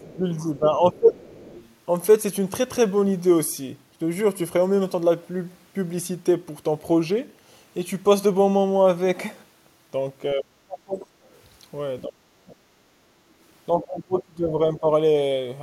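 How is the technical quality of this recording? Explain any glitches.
The recording has two recurring echo-control problems where both ends of the call overlap.

Speech suppressed in double talk, at 0.00–0.24, 0.58–1.19, 10.35–11.05, 12.07–12.50 and 13.76–14.87 s: the echo canceller likely mistook simultaneous talk for echo and clamped the line, so the speech dips by roughly 15 to 30 dB, dulling or dropping out in pieces.

Other side's voice leaking through, at 0.02–0.17, 1.19–1.75 and 11.30–11.41 s: residual loudspeaker pickup was likely not fully cancelled, so a faint second voice, some 25 to 40 dB below the main speech, slips through as brief scraps.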